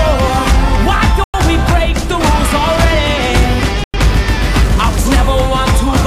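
The stream arrives in 2.5-second chunks with silence inserted at each join, so there is a gap between chunks at 1.24 and 3.84 s. Each is a 100 ms hole with hard edges; the sound stops abruptly, then resumes with nothing missing.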